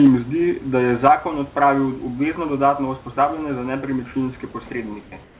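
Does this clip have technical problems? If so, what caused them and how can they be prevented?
Yes. Comfort noise in place of the background occurs from 5.02 to 5.12 s and from 5.24 s to the end. The room's textured background becomes a steady, featureless hiss about 3 to 4 dB quieter, likely because discontinuous transmission halted sending in pauses and the receiver synthesised filler noise. Disabling DTX on the sending side keeps the real background flowing.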